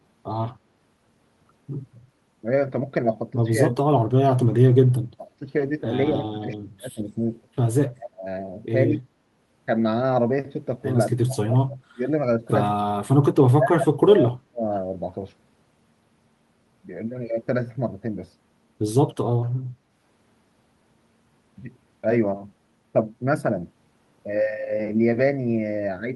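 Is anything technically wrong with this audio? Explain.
Yes. Speech suppressed in double talk occurs at 3.74–4.64, 5.16–5.41, 6.14–7.0, 7.91–8.25, 8.89–9.06, 11.12–12.06, 12.78–13.17 and 13.43–14.65 s. The voice dips by as much as about 40 dB, thinning or breaking into pieces. The likely cause is an echo canceller mistaking overlapping far-end talk for echo and attenuating the talker. The waveform shows gouged, notched envelopes, and the spectrogram shows darkened patches.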